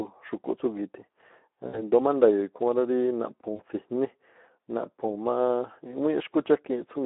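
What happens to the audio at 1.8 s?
At 1.8 s the sound is inside a burst of VoIP packet loss concealed by the speech codec, running from 1.67 to 1.82 s. About 60 ms of audio went missing, which fits three lost 20 ms frames. The decoder repeated its last pitch and filter at falling gain, so the sound smears into a fading buzzy tone or coloured noise. A spectrogram shows a frozen spectrum that dims, and the waveform shows repeating cycles that shrink in amplitude.

This happens over plainly audible Speex codec damage at about 11 kbps, confined to a 250 Hz to 3.6 kHz line. That damage gives a hoarse, noisy texture, and a spectrogram shows energy cut off above 3.6 kHz and below 250 Hz.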